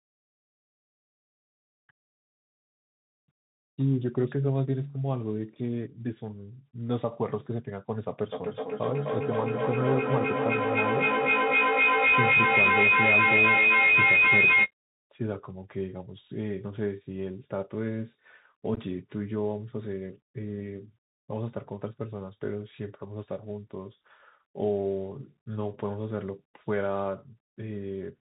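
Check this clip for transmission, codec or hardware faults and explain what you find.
Three problems here, one running the whole way through and two shorter ones.

The whole clip has Bluetooth CVSD headset codec sound, which fits a 64 kbps CVSD link. Nothing above 4 kHz, scratchy s sounds, and a grainy hiss under the speech.

From 8.3 to 14.73 s there's a feedback howl. Two devices are looping mic to speaker, building a whine near 2 kHz, about 8 dB over the speech, pulsing roughly every third of a second.

Around 18.75 to 18.78 s there's unconcealed Bluetooth headset packet loss. Lost headset packets leave short, hard-edged holes, and the speech comes out briefly chopped.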